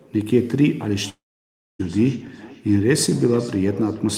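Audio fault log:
0.98–4.17 s, feedback echo between two devices: A second device on the same call is playing this stream aloud, and its sound is being picked up by the nearby microphone and sent back. The local echo canceller only removes its own playback, so nothing suppresses this loop. The speech comes back roughly every 0.4 s as a thinner, ringing copy. The loudest repeat reaches about 19 dB below the speech.
1.09–1.81 s, long network dropout: The gap is likely a network dropout in which about 0.7 s of audio never reached the receiver. The receiver stretches the last sound into a short fading buzz, and then about 0.6 s of silence follows. When the sound returns at 1.81 s, it picks up further along. The missing stretch of roughly 0.7 s is not replayed, so that part of the speech is lost.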